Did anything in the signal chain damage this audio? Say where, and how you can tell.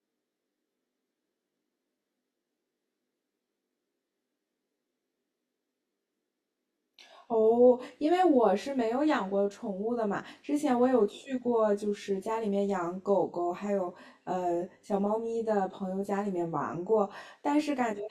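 Yes. The speech sounds rough and slightly doubled for the whole clip. This is channel delay (comb filtering): at the driver or buffer stage, one channel lags by around 20 ms, and the mono sum cancels at evenly spaced frequencies starting near 30 Hz.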